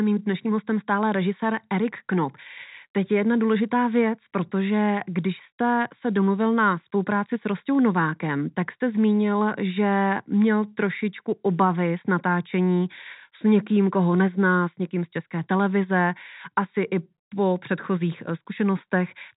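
No technical faults can be heard in this speech; its band tops out at 4 kHz, as expected from G.711 mu-law on a call path.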